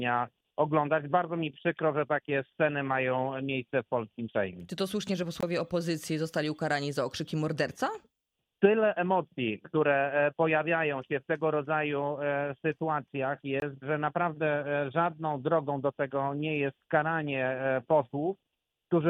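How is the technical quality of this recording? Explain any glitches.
Two brief gaps break the recording, at 5.41 to 5.43 s and at 13.60 to 13.62 s. Each is a hole of about 21 ms where the output goes silent. This is most likely a Bluetooth dropout: one audio packet missed its delivery window to the headphones and was discarded, and the gap length fits a single lost packet. Afterwards the sound resumes as though it had kept playing, with nothing repeated or delayed. That rules out a buffer stutter or skip, which would replay or shift the material.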